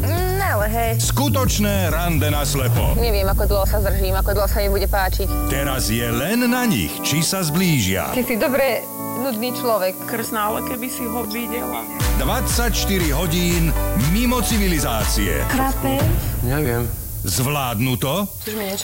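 Right from the start and all the way through, you get low bit depth with noise shaping. The audio is squeezed down to about 5 bits, and the rounding error is pushed upward, so there's a steady, thin hiss climbing toward the top end, sitting only about 10 dB under the signal.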